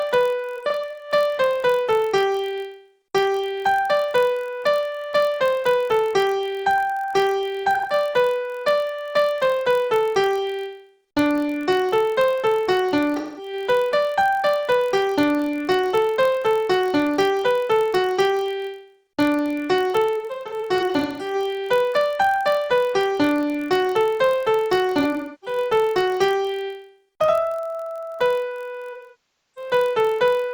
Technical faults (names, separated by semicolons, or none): block size mismatch (padded); AAC frame loss with concealment